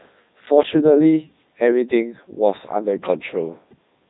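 From start to finish the speech has passed through a Codec 2 vocoder, which fits its 3.2 kbit/s mode. Only pitch, voicing, energy and a coarse spectral envelope survive, and the decoder rebuilds the voice from sine waves. It sounds heavily robotic and buzzy, with nothing above 3.8 kHz.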